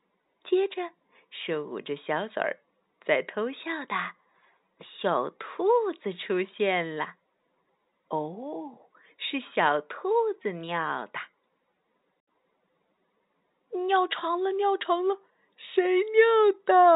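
No technical faults occur in this speech, which is carried over G.711 telephone coding that lets nothing above 3.8 kHz through.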